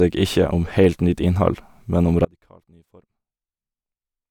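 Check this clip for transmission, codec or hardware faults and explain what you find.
One fault is present: an audio dropout to a faint residue. At 2.25 s, right after "men om", the speech cuts off abruptly and never returns. What remains until the clip ends is only a faint sound roughly 30 dB below the normal level, not silence and not a natural pause or fade. The likely cause is a break in the wanted signal while the path downstream stayed live, so only a weak leak or floor noise gets through.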